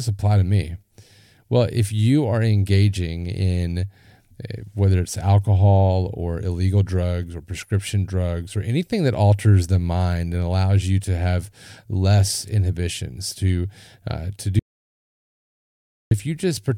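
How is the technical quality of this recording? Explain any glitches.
The recording has one clear glitch near the end. From 14.59 to 16.11 s there is an audio dropout to silence: the speech stops abruptly and about 1.52 s is replaced by silence with no room tone, then resumes mid-flow. The likely cause is a momentary loss of the input signal, with the recorder writing silence throughout. On a waveform it shows as a flat line; on a spectrogram, a dark band across all frequencies.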